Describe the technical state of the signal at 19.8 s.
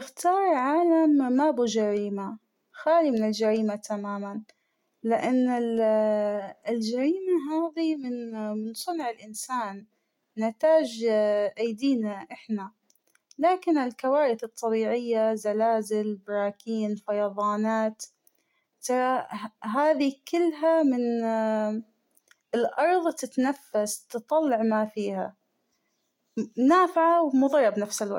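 At 19.8 s the speech signal is intact, with no audible dropout, distortion, clipping, glitch or other technical fault at that moment.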